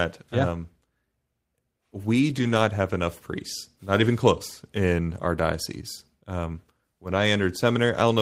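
Packets in this speech clip were lost three times, and each was rebuilt from the low-bitrate copy carried in the following packet, so these are cases of lost packet rebuilt from error correction. Playback never gaps, but the rebuilt stretches sound rougher and noisier: 0.37 to 0.43 s, fitting two packets; 2.13 to 2.59 s, just before "have enough priests", fitting about twelve; and 3.95 to 4.09 s, between "have enough priests" and "close in our diocese", fitting about four.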